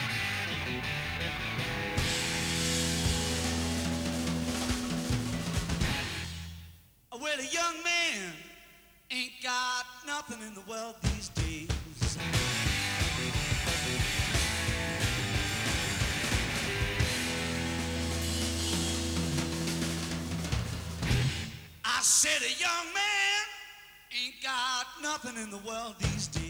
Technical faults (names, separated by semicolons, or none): none